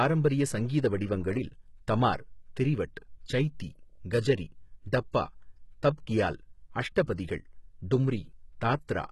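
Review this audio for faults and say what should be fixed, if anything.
Throughout the speech the treble is gritty, with lispy, metallic s sounds and nothing above 11.8 kHz. This is likely HE-AAC compression: the top band is rebuilt from copied lower bands rather than coded, which fits a very low bitrate around 16 kbps. Unlike a plain low-pass, the treble is present but misaligned. Encode at a higher bitrate with plain AAC instead of band replication.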